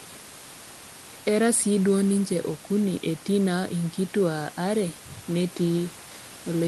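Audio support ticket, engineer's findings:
No fault found: speech sits about 18 dB above a room noise floor, with the top end rolled off around 12 kHz and coding texture consistent with an Opus call path at roughly 32 kbps.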